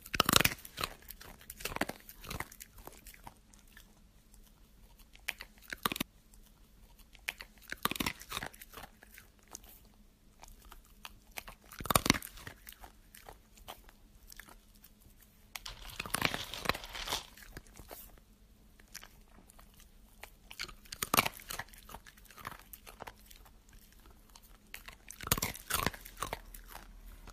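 At 6.00 s a stream segment repeats. The stretch of audio that ends at 8.00 s plays a second time, adding about 2.0 s to the running time. The player fetched or queued the same segment twice, so playback jumps back and replays roughly two seconds of material it has already delivered. The join at the jump is audible as a brief blip where the audio restarts out of sequence.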